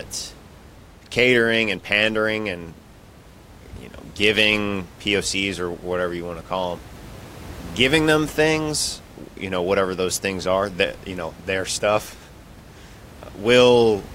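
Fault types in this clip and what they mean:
No faults found in this clip.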